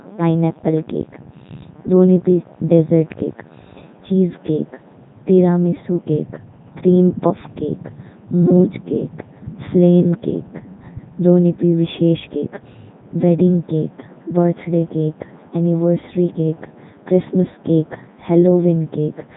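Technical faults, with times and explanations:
Throughout, Codec 2 vocoder: the speech is rebuilt from sine waves using only pitch, voicing, energy and a spectral envelope, so the waveform is lost. The voice sounds heavily robotic and buzzy, with nothing above 3.8 kHz, which fits the 3.2 kbit/s mode.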